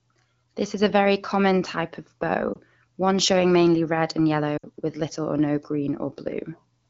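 At 2.54 to 2.58 s the speech gives a brief dip, and at 4.57 to 4.66 s it drops to near silence within two frames before recovering a little rough. These are lost AMR speech frames: corrupted frames failed their checks, so the wideband decoder repeated the last good pitch and vocal tract settings at falling gain. The first gap fits a single 20 ms frame; the second is closer to 60 ms, about three frames. The AMR-WB coding around them is clear, with only light coding damage.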